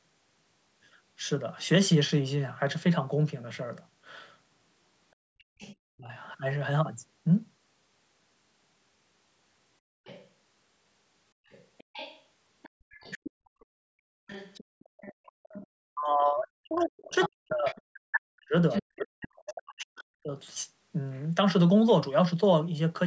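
A speech recording from a call that carries traces of the far end and loses pieces of its own talker. The other side's voice leaking through is a second, quieter voice laid under the speech at 5.59–5.75 s, 10.05–10.28 s, 11.51–13.65 s, 14.27–15.67 s, 17.2–18.82 s and 19.47–20.04 s. It sits around 20 to 25 dB down, except at 17.2–18.82 s, where it is nearly as loud as the talker. This is likely residual loudspeaker echo the canceller failed to remove. Unlike crosstalk or a second person in the room, it is a separate voice coming back from the loudspeaker playback.

Speech suppressed in double talk is a different effect: the talker's own voice is pulled down rather than something extra being added. At 5.96–6.12 s it drops by roughly 35 dB for a brief moment. Across 15.92–20.32 s it is ducked by up to about 40 dB, for around three seconds in total, while the leaked voice overlaps it. The likely cause is the echo canceller clamping down on both sides when they talk at once. 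A network dropout would cut everything, and a gain fault would not follow the far side's activity.

The call's microphone processing leaves nothing above 8 kHz.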